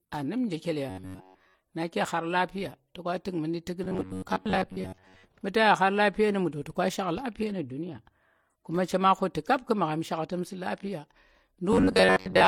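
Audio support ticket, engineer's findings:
Metallic, rigid buzz over the speech at 0.90–1.55 s, 3.84–5.24 s and 11.73–12.47 s, fixed near 93.8 Hz. Robotic sound from repeated short buffers, likely a starved playback buffer. About 10.7 ms repeated in place of most incoming audio.

Whole clip: smeared, swirly coding artefacts layered together, nothing above 18.4 kHz. Likely transcoding between lossy codecs, MP3 at 48 kbit/s then HE-AAC at 40 kbit/s. The second encoder spends bits on the first one's damage and adds its own.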